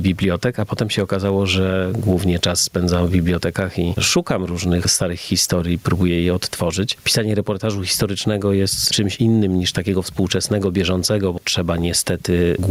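Throughout, the gain swings by around 15 dB, leaving the audio squashed: gain pumping, likely from excessive input gain driving a fast limiter.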